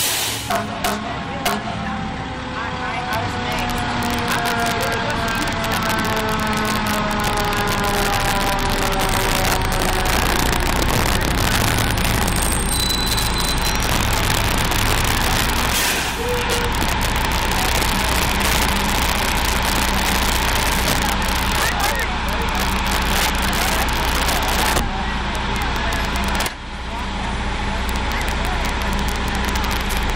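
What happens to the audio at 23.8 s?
At 23.8 s you're hearing integer overflow, and it isn't confined to that moment; it runs through the whole clip. The signal is pushed about 7 dB too hot, and instead of being held at the ceiling, any peak past the integer limit wraps around to the opposite extreme. Only around one percent of samples cross that line, but each one snaps across the full range, so the loud moments get sharp, violent cracks, far harsher than ordinary clipping.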